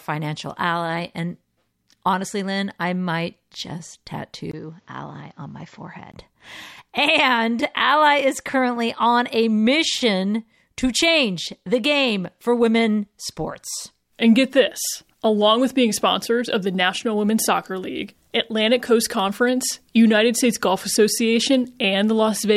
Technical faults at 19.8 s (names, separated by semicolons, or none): none